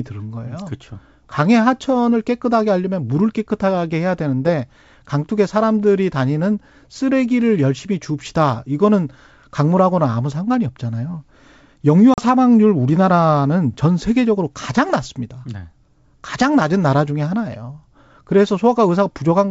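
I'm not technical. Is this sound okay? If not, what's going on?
No. At about 12.14 s the speech drops out for a moment, about 40 ms, then comes back with a brief click or roughness before settling. This is packet loss on an ADPCM call: a couple of chunks of audio went missing and were filled with silence, and the receiving end briefly lost track of the sound's level until it caught up again.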